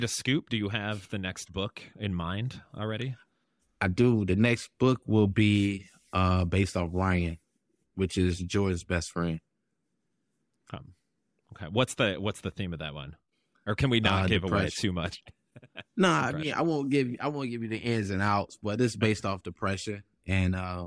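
Speech recording; no technical faults can be heard.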